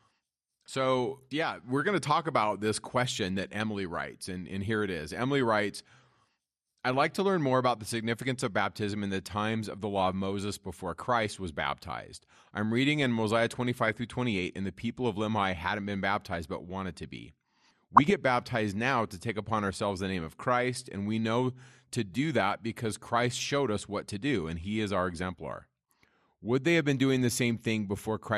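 Across the whole speech clip the sound is dull and granular, with a gurgle, which points to MP2 compression at a low rate, likely around 80 kbps. Upper sub-bands drop out and flicker, and what remains is coarsely quantised. This degradation is steady and constant, which sets it apart from the brief bursts that follow.

Three short episodes of DAB burbling break through: from 10.24 to 10.39 s, right after "of the law of"; from 13.76 to 13.90 s; and from 17.96 to 18.14 s, just before "baptized now to take". Each lasts about 0.15 to 0.18 s and sounds like a burble over the speech. Bit errors in the MP2 stream put short blips of noise into single sub-bands. Unlike the steady codec dullness, these are sudden, localised eruptions that clear as quickly as they arrive. Their density suggests a bit error rate of a small fraction of a percent.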